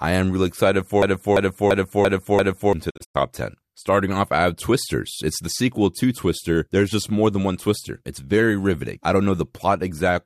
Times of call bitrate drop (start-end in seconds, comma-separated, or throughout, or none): none